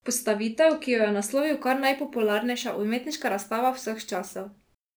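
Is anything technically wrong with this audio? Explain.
Yes. From 1.37 s, right after "ki jo je", there's crude rate conversion: samples just repeated without filtering, likely 32 kHz to 44.1 kHz, leaving a gritty inharmonic fizz on louder speech.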